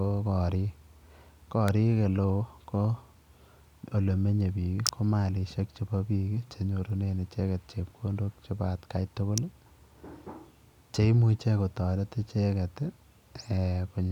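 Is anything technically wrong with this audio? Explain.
Yes. Three sharp snaps sit on top of the speech, the marks of an electrical switching spike: one at 1.68 s, another from 4.87 to 4.89 s, and another at 9.38 s. The likely cause is a nearby switch, motor or static discharge arcing briefly, with the audio line picking up the burst. The first and last peak at around -10 dBFS. The middle one is louder, near -5 dBFS.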